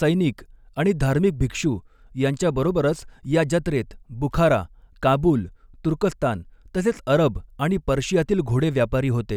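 Listening through the speech, nothing stood out as a technical fault.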